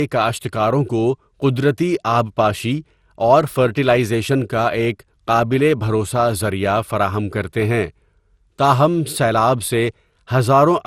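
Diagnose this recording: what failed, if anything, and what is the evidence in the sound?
Codec stage, likely generation loss: throughout, swirly, hollow, smeared speech with blurred attacks and nothing above 17.3 kHz. That is worse than one pass at an MP2-style 96 kbit/s rate would give, which suggests about seven re-encodes.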